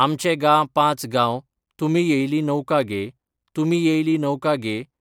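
No technical faults can be heard in this speech recording; the signal stays continuous and steady throughout, with nothing that points to a problem in how it was captured or transmitted.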